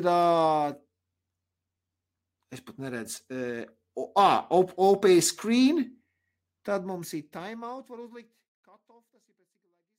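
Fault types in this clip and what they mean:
No technical faults can be heard in this speech clip. Toward the end the level eases down in a smooth fade out, beginning at around six and a half seconds and reaching silence at 9.99 s, with no click or hard edge.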